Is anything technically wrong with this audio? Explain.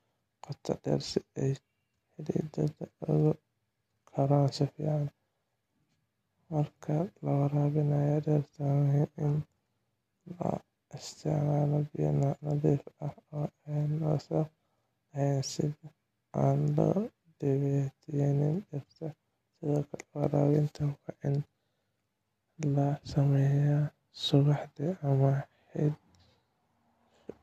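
No, the speech signal has no technical faults to point to.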